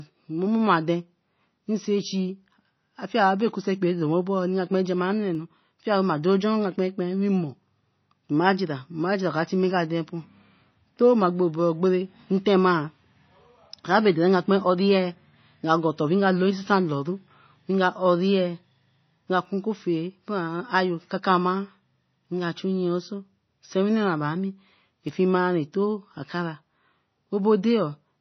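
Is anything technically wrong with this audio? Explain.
Yes. Throughout, the sound is likely MP3 compression at a starved bitrate, near 24 kbps. The encoder discards everything above 6 kHz and drops weak frequency lines frame to frame, leaving speech dull, watery and swirly, with smeared attacks.

From 2.53 s to 27.91 s, a clock drift buffer slip recurs every 2.82 s. Two device clocks likely disagree by roughly 70 ppm, so a few samples are periodically dropped or repeated. Each slip is a click or pop, about ten in all.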